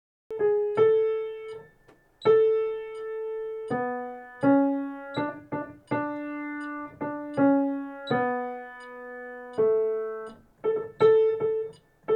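Capture began late, giving a cut-off start: digital silence until 0.31 s, then the audio enters abruptly mid-sound, with no natural attack or fade-in.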